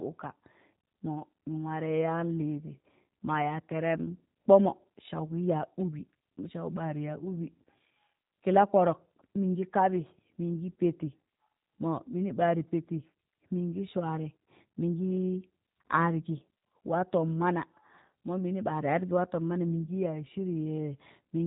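Speech runs through the G.729 codec for the whole clip, with plainly audible roughness and a buzzy, synthetic edge from pulse-based excitation, which fits 8 kbit/s. Nothing passes above 3.8 kHz, but unlike a simple low-pass filter, the texture itself sounds rebuilt rather than just dulled.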